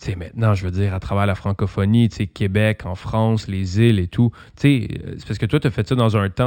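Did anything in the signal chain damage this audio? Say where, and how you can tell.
Yes. Imaging from linear upsampling damaged it at the sample-rate conversion stage, throughout the speech. Audio at 12 kHz was raised to 48 kHz by straight-line interpolation. The top is dulled, and a faint mirror image sits between 6 and 12 kHz, roughly 35 dB down, giving sibilants a metallic shimmer.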